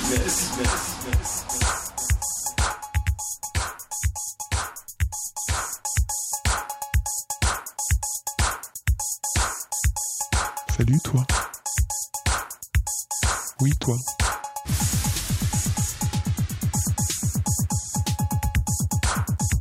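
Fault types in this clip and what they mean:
Channel delay (comb filtering): From 2.72 to 5.58 s one channel runs about 10 ms behind the other, and when the two are summed to mono the shared content cancels at evenly spaced frequencies, starting low around 40 Hz and repeating roughly every 100 Hz. The sound turns hollow and phasey. Unlike flanging, these notches stay fixed rather than sweeping, and unlike an echo, the delay is too short to be heard as a separate repeat.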